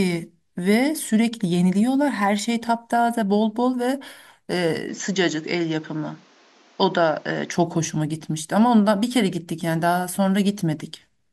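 At 4.89 s the speech abruptly loses its top end and turns slightly duller, with no gap at the change, and it stays that way until 7.52 s, when the full brightness returns. A faint new background noise sits far beneath the speech, while the loudness hardly shifts. The likely cause is an input switched to a poorer device mid-recording. On a spectrogram, energy above about 7.6 kHz vanishes for that stretch, leaving a flat ceiling, while the waveform envelope stays much the same.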